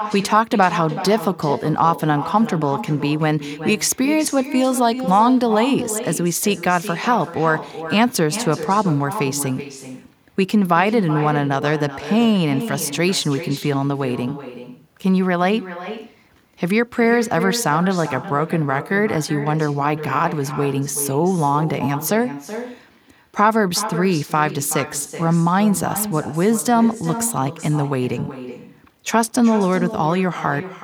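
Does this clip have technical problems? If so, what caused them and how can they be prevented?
Yes. An echo with no canceller runs through the whole clip. Every phrase returns about 400 ms later as a thinner copy, about 11 dB quieter. The far end's loudspeaker fed its microphone, and nothing subtracted that return path. Prevention: enable acoustic echo cancellation at the far end, or have that participant use headphones.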